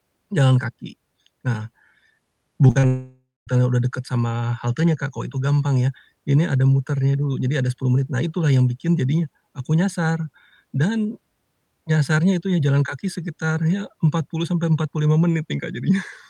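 Brief smears at 2.67, 2.71 and 2.79 s are short concealed packet loss, where 20 to 40 ms gaps were patched by extending the preceding sound. From 2.87 s the audio becomes a fading buzz or hiss, then falls silent for 0.22 s before resuming at 3.49 s. This is likely a long network dropout that lost 0.6 s.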